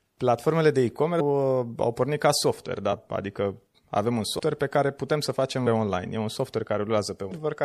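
Throughout, the speech sounds watery and swirly, with dulled treble and smeared consonant attacks. This is likely MP3 compression at a low bitrate, around 64 kbps, where the encoder cuts the high frequencies and lets weak detail flicker on and off between frames.

At 1.19, 2.92, 4.38, 5.66 and 7.30 s, the speech jumps ahead at a brief smeared blip rather than a hard click. These are compressed frames skipped. Whole chunks are lost in 26.1 ms steps, dropping roughly a third of a second at 1.19, 5.66 and 7.30 s, under a tenth at 2.92 s, and about 150 ms at 4.38 s.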